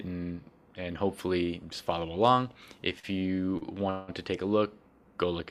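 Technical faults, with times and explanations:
2.99–3.05 s and 3.58–3.63 s, short stall from a late packet: the sound briefly hangs, held for about 40 ms and then 36 ms with a faint buzzy smear, before carrying on unbroken. A packet arrived late, so the receiver stretched the last sound until it came, adding delay without losing any audio.
3.90–4.10 s, call audio freeze: the sound locks into a fading buzz for about 180 ms without falling to silence, then resumes where it stopped with nothing skipped. Packets were likely held up in transit, draining the jitter buffer, so the receiver filled the wait with continued sound.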